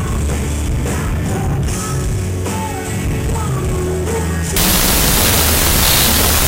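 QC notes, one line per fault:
4.56–6.48 s, wrong sample width: 16-bit samples read as unsigned 8-bit bury the sound in loud noise at half speed, an octave down, unlike a byte swap.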